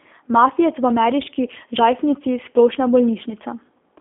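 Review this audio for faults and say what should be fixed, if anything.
The whole clip has G.729 codec damage: nothing above 3.6 kHz, a roughly 250 Hz to 3.5 kHz band, and a rough, synthetic edge from pulse-based rebuilding, which fits an 8 kbit/s link. Capture or route it with a wideband codec instead.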